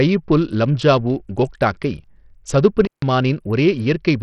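A speech recording, likely passed through Bluetooth SBC compression at a starved bit pool, consistent with roughly 64 kbps: nothing survives above 13.9 kHz, and heavy gritty quantisation noise and aliasing ride on the voice throughout. An intermittent contact, a plug or cable briefly opening the line, cuts the sound out from 2.85 to 3.02 s for about 152 ms, with crackle at both edges of the gap.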